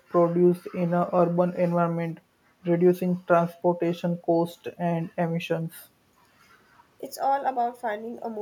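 No faults are audible anywhere in the speech: no dropouts, clicks, distortion or timing breaks at any point.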